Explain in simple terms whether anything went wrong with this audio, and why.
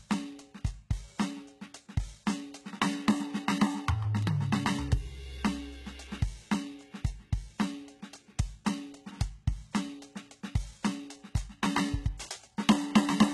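The music sounds dull and gritty throughout, with nothing above 11.8 kHz, likely from heavy HE-AAC compression rebuilding the treble from copied lower frequencies. Between 4.03 and 4.42 s, three very brief clicks are CD scratch ticks, where the player patched over data the disc scratch destroyed.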